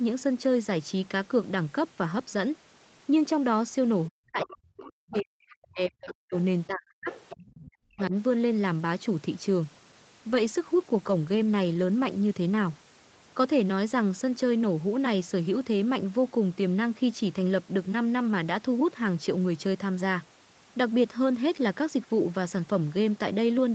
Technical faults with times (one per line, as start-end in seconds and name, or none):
4.08-6.34 speech suppressed in double talk
4.42-4.56 other side's voice leaking through
5.11-5.55 other side's voice leaking through
6.08-6.37 other side's voice leaking through
6.67-7.09 speech suppressed in double talk
7.06-7.46 other side's voice leaking through
7.43-8.14 speech suppressed in double talk
7.98-8.02 other side's voice leaking through
9.63-13.09 call bitrate drop